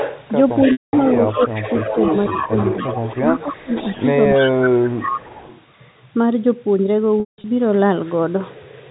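A delayed second copy of the speech, trailing by about 0.28 s, runs from 0.0 to 0.28 s, from 0.5 to 4.09 s and from 4.34 to 5.6 s. It sits about 5 dB below the speech at its strongest and about 10 dB below in the long middle stretch. This is an echo leak, likely from a loudspeaker whose echo canceller let the far end's own voice return. From 0.72 to 0.93 s a buzzy held tone fades to silence before speech resumes. This is packet loss with pitch repetition, where the last pitch period is repeated to cover about 210 ms of missing audio. The speech dips sharply at 1.36 to 1.64 s, 2.32 to 2.52 s, 3.18 to 3.72 s, 4.37 to 4.44 s and 4.63 to 5.32 s, falling by up to about 20 dB in the worst spots. This is speech suppressed in double talk, likely an echo canceller turning down both voices while both sides spoke at once. The same held-and-fading patch returns between 7.2 and 7.44 s, where 210 ms of losses are scattered across 240 ms, with the longest gap lasting 180 ms.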